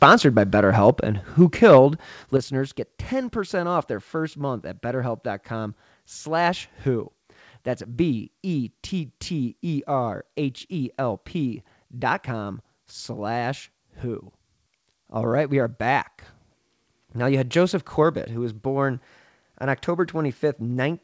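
From 0.02 to 0.15 s the opening peaks turn harsh and crackly, their tops flattened, most likely microphone overload, with the input driven about 7 dB past the converter's limit and a few percent of samples clipped. At 1.05 s the level drops abruptly, voice and background together, by about 5 dB, likely the microphone volume being stepped down by the call software after that distortion. The same crackle returns from 1.41 to 1.79 s, likely overload again at about 5 dB over, followed at 2.37 s by a sudden fall of about 8 dB, likely another automatic step down. Through the call path the sound carries nothing above 8 kHz, consistent with G.722.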